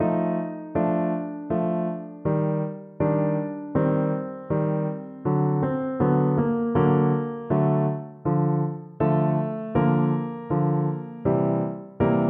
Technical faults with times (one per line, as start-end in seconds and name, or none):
none